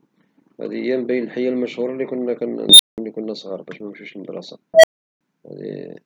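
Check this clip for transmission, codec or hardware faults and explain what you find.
Two bursts from an unstable filter break into the speech. The first runs from 2.69 to 2.98 s. The second runs from 4.74 to 5.21 s. A recursive filter has bad coefficients, so its output feeds back and grows without limit. Each time a tone swells over about 100 ms, clips, then overflows. The first squeals near 4 kHz and is followed by 186 ms of silence. The second is a lower beep near 700 Hz, followed by 372 ms of silence.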